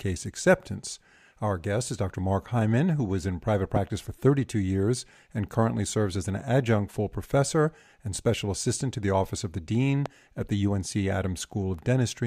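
Speech clip with two loud pops, at 3.76 s right after "who was in private" and at 10.06 s just before "at the", both well above the speech, likely a static or switch glitch.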